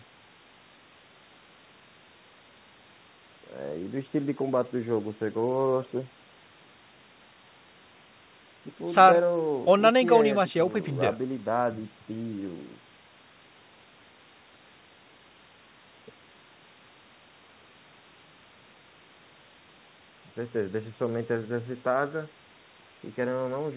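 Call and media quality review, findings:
No faults; audio band-limited to 4 kHz by codec.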